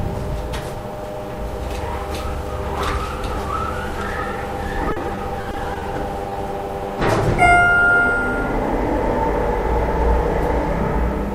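From 4.89 to 5.83 s, repeated packet loss (robotic sound) sets in: packets keep arriving lost or late, and each gap, the longest 40 ms, is patched by extending the preceding sound. About a fifth of the stretch is synthetic fill, so the audio turns choppy and mechanical, with fragments dropped.

At 6.29 to 6.33 s, short concealed packet loss follows: about 20 ms of audio failed to reach the decoder in time, and the receiver bridged it by continuing the last sound before blending back, leaving a brief smear or wobble.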